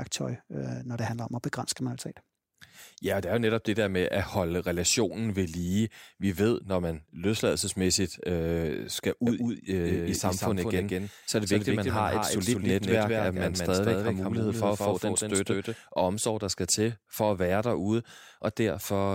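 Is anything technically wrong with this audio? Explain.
Yes. From 9.27 s to 15.75 s there is a doubled audio track. It begins just after "man løsladelsesmæssigt øh skal" and ends before "og omsorg der skal". A second full-band copy of the speech runs about 200 ms behind the original, roughly 5 dB quieter. It is likely captured twice through a slower path. The copy has no reverb tail or room colour. It sounds like a clean slapback echo that switches on and off abruptly.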